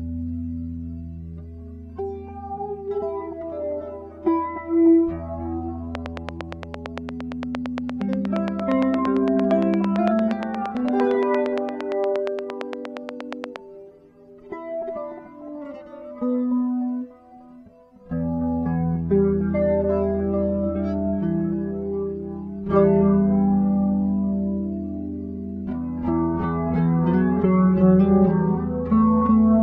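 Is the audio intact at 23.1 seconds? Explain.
Yes, the audio is intact at 23.1 seconds, with no fault audible at that moment.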